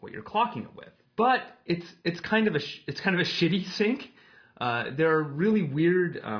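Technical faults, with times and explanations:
No technical faults, with times or otherwise, can be heard in this audio.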